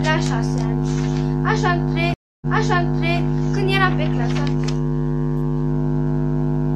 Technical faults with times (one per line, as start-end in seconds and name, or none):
2.14-3.20 stream reconnect